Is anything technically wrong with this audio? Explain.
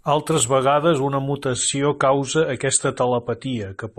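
Yes. From 1.46 s, just after "vegades una", to the end, the adaptive stream switches to a lower bitrate without any gap. The treble above 9 kHz vanishes, which fits a step down from about 96 to 32 kbit/s AAC. On a spectrogram the high band ends abruptly at a flat ceiling.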